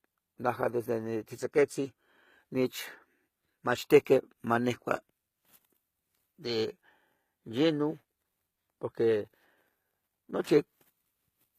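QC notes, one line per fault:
Throughout: HE-AAC compression, likely the cause of what is heard. The upper treble is present but not genuine. The codec keeps only the lower spectrum and rebuilds the top by copying lower bands upward under a coarse envelope. The copied harmonics do not line up with the real ones, so s sounds turn gritty and lispy. The damage is plainly audible, which fits a bitrate around 20 kbps. Nothing remains above 14.9 kHz.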